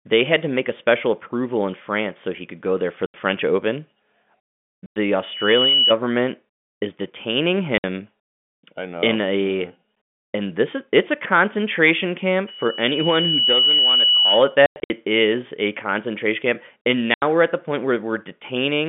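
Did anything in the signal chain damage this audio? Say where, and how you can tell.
Yes. Packet loss filled with silence at the network stage: hard-edged dropouts at 3.06–3.14, 4.86–4.96, 7.78–7.84, 14.66–14.90 and 17.14–17.22 s. The gaps come in multiples of 20 ms, which fits 20 ms packets. They are true silence, not smeared concealment.

Loudspeaker feedback squeal from an acoustic loop: a single 2.9 kHz tone at 5.22–5.95 s and 12.47–14.56 s. It swells over about half a second and about a second to roughly 5 dB above the speech. That build-up rules out a steady interference tone.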